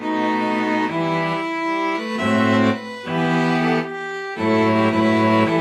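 No audible technical faults: the signal runs continuously with no dropouts, level jumps or distortion anywhere in the clip.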